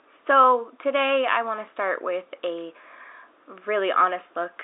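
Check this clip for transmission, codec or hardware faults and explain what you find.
Nothing stood out on listening to this speech clip, which carries the narrow band of a telephone line with faint room noise well beneath the talker.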